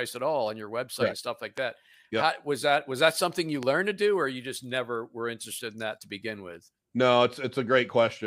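Loud pops occur at 1.58 to 1.60 s and again at 3.63 to 3.65 s, each a single sharp click-thump standing roughly 10 dB above the speech, which carries on beneath them. Each is likely a brief voltage spike, from a plug, switch, static discharge or driver glitch, riding onto the signal. The downstream circuitry rounds that spike into a short pulse about 20 ms long, heard as a percussive pop.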